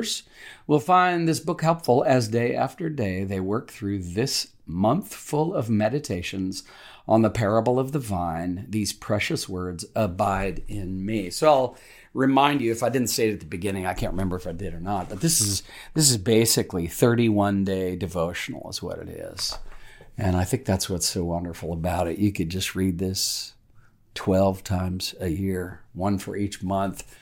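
Listening to this speech recording, nothing technical stood out at any point.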